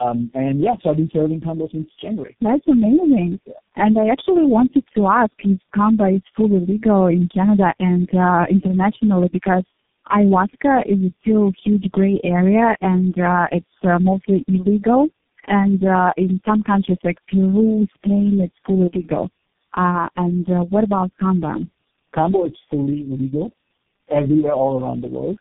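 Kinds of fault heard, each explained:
Tandem speech coding: the speech has passed through four low-rate speech coders in a row, which sounds like AMR-NB, GSM full rate, G.729A and finally G.723.1, with plain telephone links between them, each coder rebuilding the previous one's flawed output. The result is rougher, more muffled and more warbly than any single coder would give, with nothing above 3.7 kHz. A lone low-bitrate codec or simple band-limiting would not pile up distortion like this.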